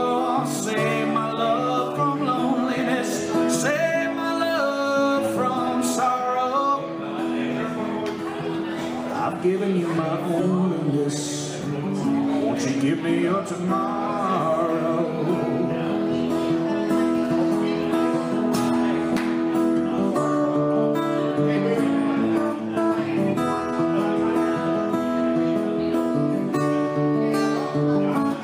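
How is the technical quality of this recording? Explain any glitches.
Listening closely, nothing in the recording stood out as a technical problem, so there are no glitches to explain.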